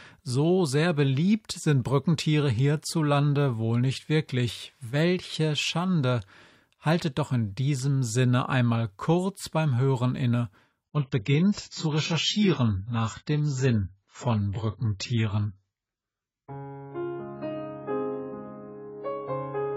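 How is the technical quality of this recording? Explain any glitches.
The first half holds up well, but at 10.84 s the quality drops abruptly and stays low to the end. This is an adaptive stream switching to a lower bitrate: when the connection slowed, the player moved to a leaner encode without pausing. Above 7.6 kHz the treble disappears, and the remaining sound turns duller and swirly. That fits a switch from roughly 96 kbit/s AAC to about 16 kbit/s. On a spectrogram, the upper bands end in a hard horizontal ceiling at 7.6 kHz from that moment on. The waveform shows no gap.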